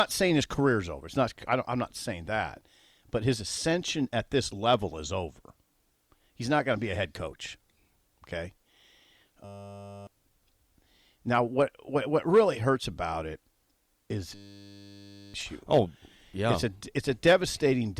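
At 9.45 s the speech gives way to a steady 100 Hz buzz lasting until 10.07 s, and the same buzz returns from 14.35 s to 15.34 s. Each is a system hang loop: the system stalled while the sound hardware kept replaying one 10 ms slice of its ring buffer, which fits a small buffer. About 0.7 s of speech is lost in the first stall and about a second in the second.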